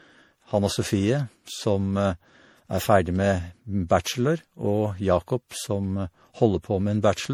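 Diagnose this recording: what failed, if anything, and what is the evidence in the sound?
Codec stage: generation loss, likely from re-encoding the speech as MP3 around seven times at what sounds like 64 kbit/s. Each pass requantises on a shifted frame grid, so throughout the sound turns swirly and hollow, with smeared attacks, despite content up to about 20.6 kHz.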